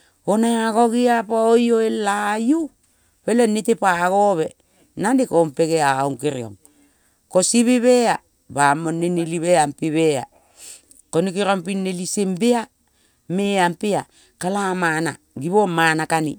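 No technical faults can be heard in the speech at any point.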